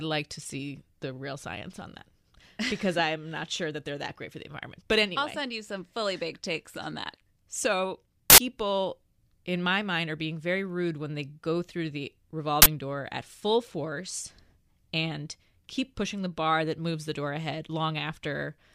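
At 8.30–8.38 s and 12.62–12.66 s, after "they go through the", an uninitialised buffer plays leftover memory as samples: loud digital noise bursts, appearing as tall waveform blocks and broadband spectrogram columns.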